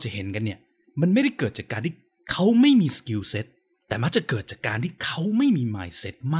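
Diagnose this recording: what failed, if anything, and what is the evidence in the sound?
No fault found in this recording.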